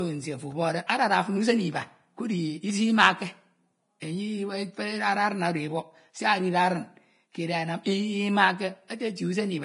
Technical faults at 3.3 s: Vorbis compression

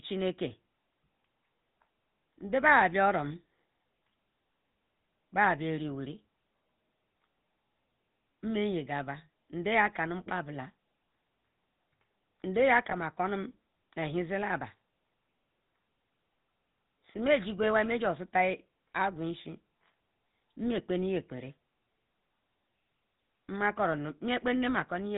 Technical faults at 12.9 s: GSM full-rate codec; lost GSM frames

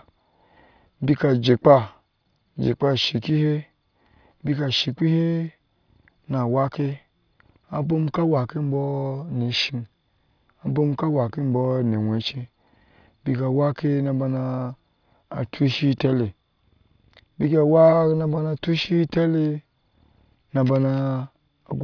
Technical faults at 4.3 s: none

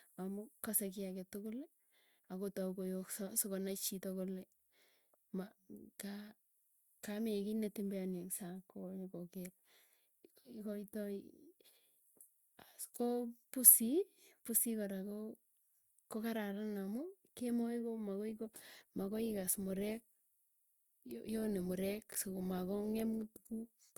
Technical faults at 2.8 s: none

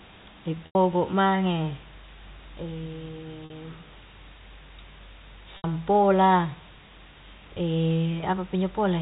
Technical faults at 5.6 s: low bit depth with dither; packet loss with pitch repetition

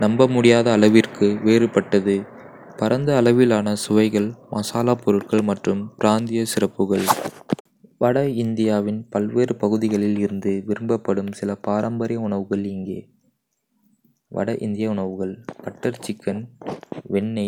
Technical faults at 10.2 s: none

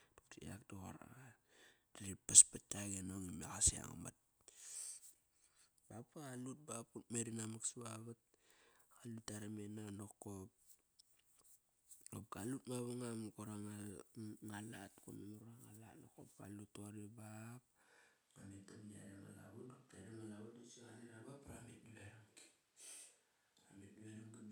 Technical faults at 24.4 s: switch to a distant microphone

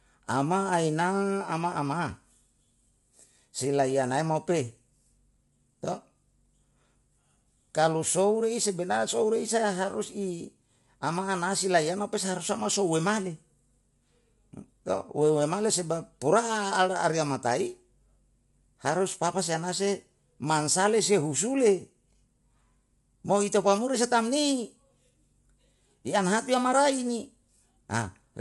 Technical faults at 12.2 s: low-delay AAC compression

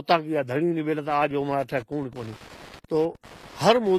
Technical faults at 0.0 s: HE-AAC compression

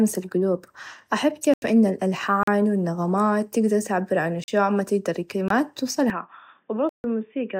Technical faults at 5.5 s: block of digital silence

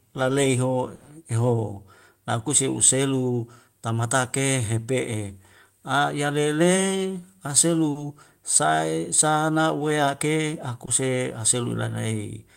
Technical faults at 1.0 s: burst of packet loss

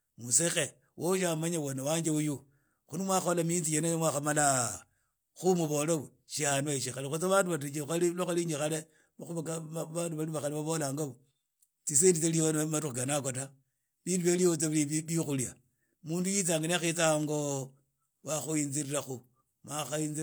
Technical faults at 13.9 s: none

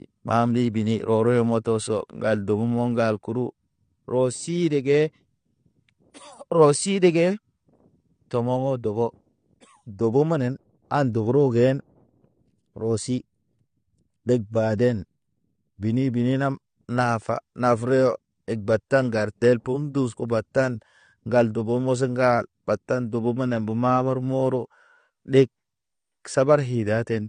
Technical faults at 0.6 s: AAC compression

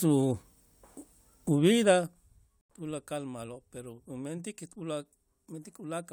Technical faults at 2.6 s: corrupt frame muted

